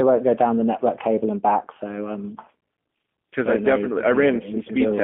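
From start to finish the speech has passed through a G.729 codec, most likely the G.729A variant, at a rate that fits 8 kbit/s. Instead of carrying the waveform, the codec resends a vocal tract filter, a pitch predictor and a few pulses per 10 ms frame, inside a telephone band of about 200 Hz to 3.4 kHz. The result is plainly audible: thin, boxy speech with a rough, synthetic buzz in place of natural texture.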